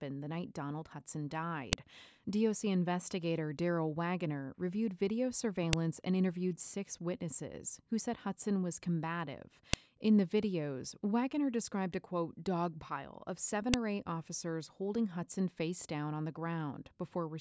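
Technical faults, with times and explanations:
1.73, 5.73, 9.73 and 13.74 s, file header played as audio: a sharp, loud snap recurs every 4.0 s, including between "dog pile of seven" and "or eight officers holding". Header bytes from each joined piece play as samples, so unlike random dropout clicks, the snaps stay evenly spaced regardless of the speech.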